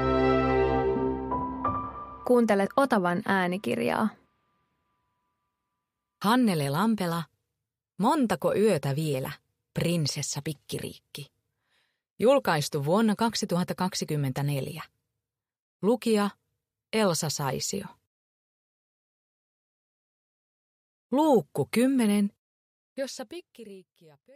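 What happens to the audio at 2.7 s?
Right around 2.65 s there are compressed frames skipped. A small chunk of the encoded stream never got played, either because those frames were missing or because the decoder rejected them as damaged, so the audio lurches forward by roughly 70 ms. That jump fits about three frames at 23.2 ms each. At the join, the audio is heard to jump ahead abruptly.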